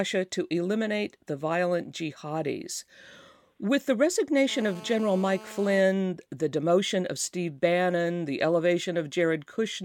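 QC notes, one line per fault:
4.49–5.81 s: GSM phone buzz, a hard raspy 217 Hz drone with stacked harmonics over the speech, sitting about 19 dB down; a nearby 2G handset on a call, its radio bursts rectified by the audio circuit.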